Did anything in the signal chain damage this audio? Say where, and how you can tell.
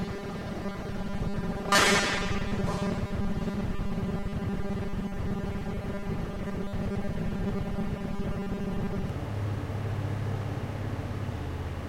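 Yes, there's robotic sound from repeated short buffers from 0.01 to 9.1 s: a rigid 200 Hz buzz. It's likely a driver or buffer stage looping about half the audio in 5 ms chunks.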